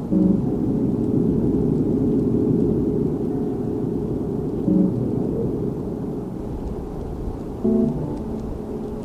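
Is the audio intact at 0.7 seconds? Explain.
Yes, the audio is intact at 0.7 seconds, with nothing there that breaks, distorts or interrupts the sound.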